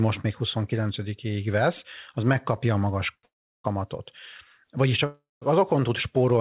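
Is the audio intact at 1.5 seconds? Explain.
Yes, the speech at 1.5 s is intact, with no fault there, just the narrowband sound of the call path, which carries nothing above 4 kHz.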